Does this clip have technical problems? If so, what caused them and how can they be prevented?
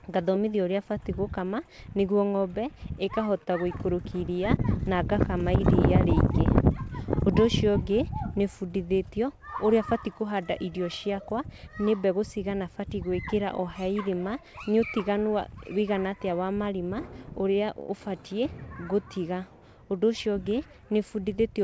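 Yes. Between 3.05 and 4.61 s, just before "na ngakama iria", there are scattered short gaps: about four lost or late packets, the longest around 30 ms. The receiver covered roughly 70 ms of holes by extending the preceding sound, which leaves brief ticks and smears. Better network quality of service or forward error correction would reduce these losses.

From 17.80 to 17.91 s, just before "ũbatiĩ gũtiga", there is a short stall from a late packet. The jitter buffer ran dry, so the receiver held the last sound for 85 ms until the packet arrived, and the delay increased by the same amount. A slightly deeper jitter buffer would absorb a delay like this.

From 19.84 to 20.74 s, right after "ũrĩa ũbatiĩ gũtiga", a jitter buffer speed-up plays the audio at 105% speed with unchanged pitch. The receiver cut about 50 ms of pitch-period pieces to clear the excess audio held in the buffer, so this stretch sounds slightly hurried. 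Steadier packet delivery would make this catch-up unnecessary.

The audio passed through a G.722 call path, with nothing above 8 kHz, consistent with 64 kbps G.722.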